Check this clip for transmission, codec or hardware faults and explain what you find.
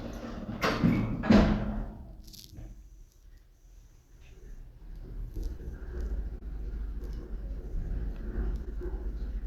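There's one transmission fault here: short concealed packet loss, at 5.57 to 5.61 s, 6.39 to 6.43 s and 8.65 to 8.68 s. Each time about 20 ms of audio arrived too late, so the receiver extended the preceding sound to bridge it, leaving a quick smear or wobble.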